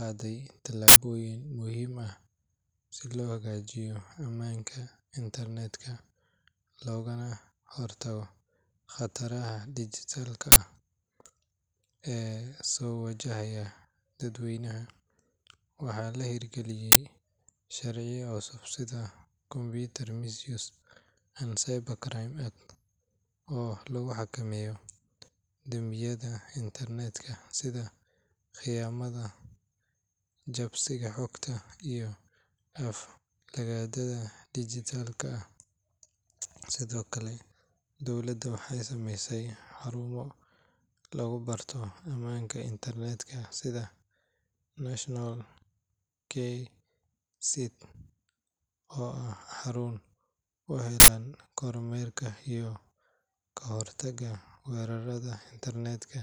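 Uninitialised buffer bursts occur at 0.88–0.96 s, just before "muhiim ah"; 10.52–10.56 s, after "khataraha dhijitaalka"; 16.92–16.96 s; and 51.0–51.08 s. Blocks of 80 or 40 ms were played before the speech reached them, so stale memory sounds as loud digital noise.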